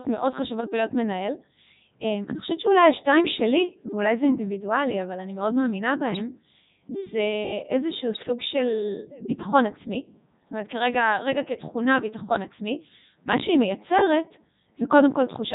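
Throughout, the speech has the buzzy, robotic quality of the Codec 2 vocoder, consistent with its 3.2 kbit/s mode. Only pitch, voicing, energy and a spectral envelope survive, and the decoder rebuilds the voice from sine waves, so the original waveform is heavily damaged.

Bit errors on digital voice radio hit at 0.58 to 0.69 s and again at 8.14 to 8.29 s, with an error rate of a couple of percent. Corrupted parameters throw several consecutive frames off, producing abrupt jumps in pitch, level and timbre that break into warbling, bleepy gibberish.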